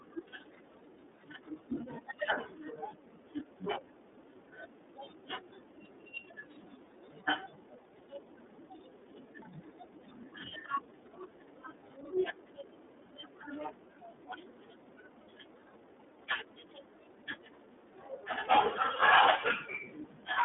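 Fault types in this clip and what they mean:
iLBC codec: a narrowband VoIP coder that encodes each frame's excitation independently of the last. The speech stops above 3.8 kHz, sits in a thin 250 Hz to 3.6 kHz band, and sounds plainly rough and synthetic, consistent with 30 ms frames at 13.33 kbps.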